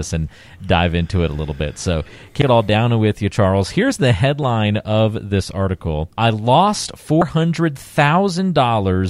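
Speech clip with damaged data in a compressed stream at 2.42–2.45 s, before "it all down with", and 7.22–7.25 s, after "this article I lost". Each is a brief disruption as the decoder misreads corrupted frames, showing as a short glitch in the waveform.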